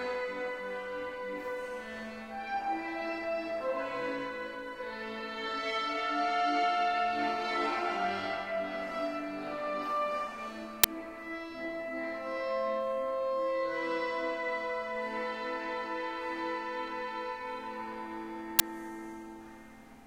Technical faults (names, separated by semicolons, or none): uninitialised buffer